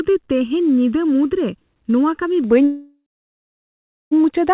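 A speech recording carried over a narrowband call path, with nothing audible above 4 kHz, consistent with G.711 mu-law. From 0.00 to 2.44 s, channel delay (comb filtering) makes the sound hollow and phasey. One channel lags the other by about 0.7 ms, and summing to mono cancels content at regularly spaced frequencies, with the first notch around 700 Hz. From 2.64 to 4.13 s there is a call audio freeze. The last sound is stretched into a decaying buzz or hiss, then about 1.12 s of silence, before playback resumes where it stopped. This is likely a jitter buffer running dry while packets were delayed, inserting a 1.47 s gap without losing any of the original audio.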